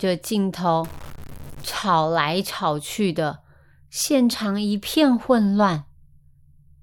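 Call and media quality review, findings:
Harsh buzzy distortion 0.84–1.73 s, gaps filled with hiss; likely a stuck bit in the converter or data line, one bit pinned, error around −30 dBFS.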